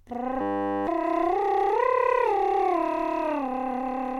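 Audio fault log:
0.41–0.87 s, system hang loop: the computer or audio driver stalled while the hardware kept replaying one 10 ms piece of its buffer. The music becomes a steady buzz at 100 Hz, and roughly half a second of music never plays.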